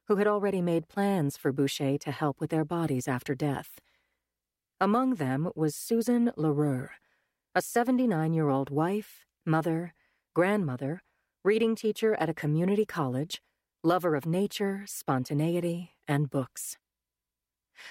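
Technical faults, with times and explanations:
16.56 s, lost LE Audio frames: a single 10 ms frame went missing near the end of the speech, and the LC3 decoder covered the gap by replaying the previous frame's spectrum with its signs randomised. With just one frame gone there's no fade-out, only a brief noisy smear where the tonal detail of the speech turns grainy for an instant before normal decoding resumes.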